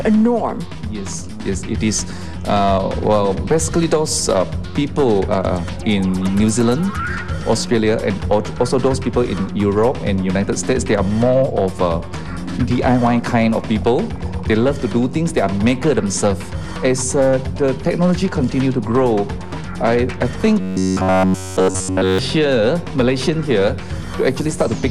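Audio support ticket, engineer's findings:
Robotic sound from repeated short buffers, 20.61 to 22.19 s. Rigid metallic buzz at 93.8 Hz, which fits a repeated block of about 10.7 ms. Likely cause: starved input path looping the last buffer. Essentially all real audio there is skipped.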